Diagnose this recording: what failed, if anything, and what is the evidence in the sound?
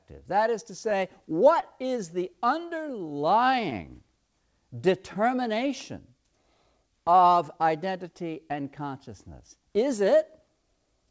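Clock drift between sender and receiver, a network and buffer stage issue: the sender's clock runs roughly one and a half percent slow, so the jitter buffer keeps draining throughout.

Repeated timing corrections from 1.52 to 10.72 s: the receiver stretches playback to about 99% speed, adding roughly a tenth of a second in small, unevenly spaced hiccups.

Short stalls from late packets at 1.60 to 1.65 s and 3.70 to 3.74 s: the buffer ran empty, and the last sound was held for 18 ms and 15 ms, with nothing lost.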